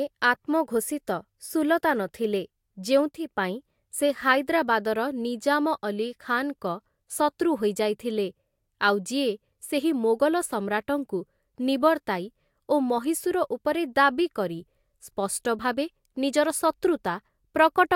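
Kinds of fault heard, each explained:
Sudden gain jump: gain was likely changed without a ramp, so speech and background noise drop together by about 6 dB from 3.11 to 3.29 s.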